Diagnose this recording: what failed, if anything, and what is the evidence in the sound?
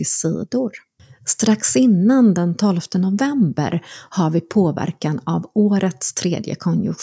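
Nothing failed; no fault found.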